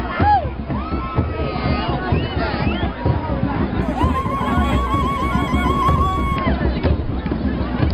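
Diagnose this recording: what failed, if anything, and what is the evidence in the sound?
From 3.82 to 6.36 s the top end goes dull while a faint metallic shimmer rides on the brightest sounds: imaging from linear upsampling at the sample-rate conversion stage. Straight-line interpolation, which fits a conversion from 11 kHz up to 44.1 kHz, leaves mirrored copies between 5.5 and 11 kHz, roughly 35 dB down.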